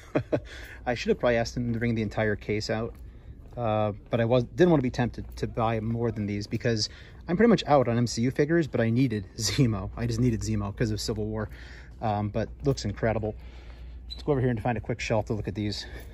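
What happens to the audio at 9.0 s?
Nothing goes wrong at 9.0 s; the audio plays through that moment cleanly, with no dropout, click or distortion.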